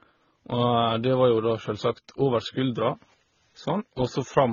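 Throughout the speech, smeared, watery artefacts layer over a dull top end. This is likely transcoding between lossy codecs, fitting a low-bitrate HE-AAC, MP3 and AAC-LC chain.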